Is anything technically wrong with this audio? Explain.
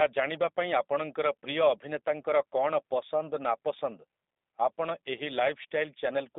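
Yes. Throughout, the speech carries G.729 codec damage: it is rebuilt from a vocal tract filter, pitch predictor and sparse pulses at a rate that fits 8 kbit/s, sounding rough and synthetic within a roughly 250 Hz to 3.7 kHz band. That grainy, buzzy texture separates it from plain telephone band-limiting.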